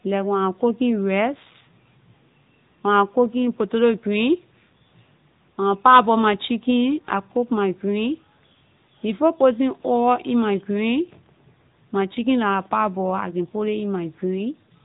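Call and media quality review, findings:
AMR narrowband mobile codec across the full clip; coding damage plainly audible. Speech passed through an 8 kHz vocal-tract model codec, consistent with the 10.2 kbps AMR-NB mode. Nothing above 3.8 kHz survives, so the speech sounds muffled and phone-like, with buzzy, synthetic edges.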